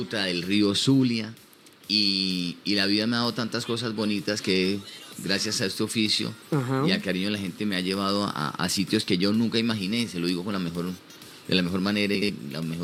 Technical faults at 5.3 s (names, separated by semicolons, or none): none